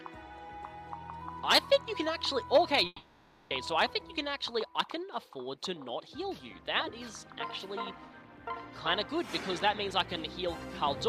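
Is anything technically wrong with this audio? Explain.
Yes. A long network dropout occurs from 2.86 to 3.51 s. The sound turns into a fading buzz or hiss for about 640 ms, then about 20 ms of silence. The audio resumes with that stretch missing. Likely, no packets arrived and the receiver extended the last sound.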